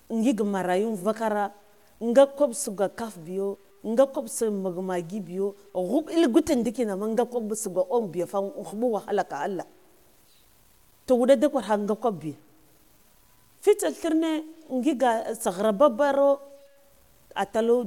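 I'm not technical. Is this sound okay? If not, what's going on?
No. Low bit depth without dither runs through the whole speech clip: a grainy, gritty roughness that follows the voice and gets worse as it quietens. The sound likely went through too few loudness steps, roughly what 9-bit audio allows, and was cut to fit with no smoothing.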